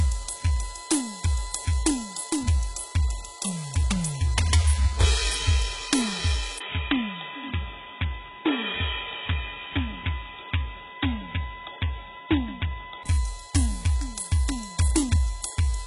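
A piece of music carries USB whine throughout: a fixed 1 kHz tone about 20 dB below the music, drawn on a spectrogram as a steady horizontal line at 1 kHz. The whole clip also shows HE-AAC compression, the likely cause of its metallic, gritty treble. Content stops dead at 11.1 kHz, and the band beneath looks smeared and copied upward from lower frequencies, which points to a very low bitrate around 12 kbps. From 6.58 to 13.05 s the sound turns dull and boxy, with a 20 ms silence at the change, a drop of about 5 dB and new noise about 30 dB below the music, most likely because the input switched to a poorer device. In the waveform this appears as a brief gap followed by smaller amplitude, and on the spectrogram as a hard ceiling at 3.8 kHz that lifts again after 13.05 s.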